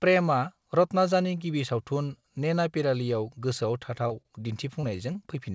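Speech, carried over what sounds like a G.722 call at 64 kbps with nothing above 8 kHz, has two brief smears at 4.08 to 4.12 s and 4.81 to 4.97 s. About 20 ms of sound is lost in each, and the gap is bridged by continuing the preceding sound. These are short concealed packet losses. Sounds are also held slightly too long, with a faint buzz or dip, at 4.22 to 4.40 s (stretched by 30 ms) and 5.13 to 5.17 s (16 ms), with nothing missing. These are short stalls from a late packet, where the jitter buffer emptied while waiting.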